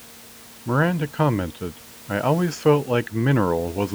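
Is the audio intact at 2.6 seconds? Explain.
Yes, the audio is intact at 2.6 seconds; the only thing heard beneath the speech there is the room's own background noise, about 23 dB lower, which belongs to the recording rather than to any fault.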